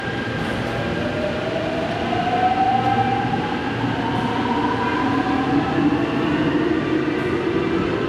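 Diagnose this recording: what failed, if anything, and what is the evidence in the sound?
Nothing failed: at no stage from capture to playback is there a dropout, click, distortion or level fault anywhere in the sound.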